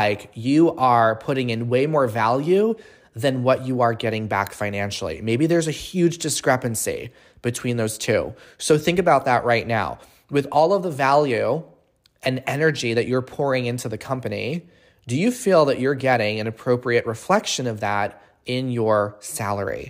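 A speech recording with nothing technically wrong to point to.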